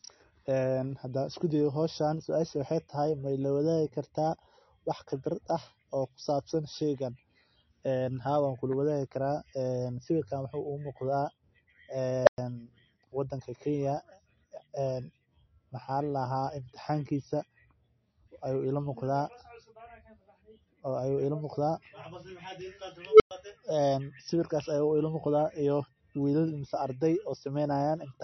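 MP3 compression, likely the cause of the watery, swirly speech throughout: the treble stops at 5.9 kHz, as a starved encoder at a low bitrate near 33 kbps would leave it.

Unstable filter at 12.24–12.38 s and 23.07–23.31 s: a runaway recursive filter swells a squeal around 500 Hz, then 400 Hz, over 32 ms and 132 ms, before overflowing into 110 ms of silence.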